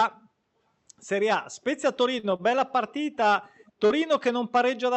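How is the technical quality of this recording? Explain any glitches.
The recording has three kinds of glitch, all packed between about 2.2 and 3.9 s of the speech.

From 2.19 to 2.73 s there are repeated stalls (stutter): the audio drags and catches four times, the longest hold 37 ms. Late packets emptied the jitter buffer, and the receiver stretched the last sound each time, with nothing lost.

At 2.88 to 2.94 s and 3.58 to 3.72 s comes an echo leak: a very faint copy, around 30 dB down, trailing 373 ms behind. This is likely a loudspeaker's pickup slipping past the far end's echo canceller.

From 3.86 to 3.93 s there is short concealed packet loss: a brief smear where about 40 ms of audio never arrived and was filled by continuing the preceding sound before blending back.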